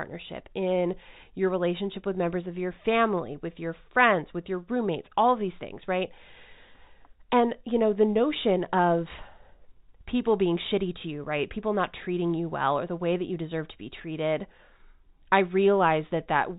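No technical faults are audible in this speech.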